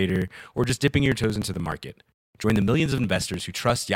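From 0.10 to 3.88 s, periodic USB or driver dropouts skip about 4 ms every 0.06 s, ticking steadily; waveform shows regular splices, spectrogram thin vertical lines.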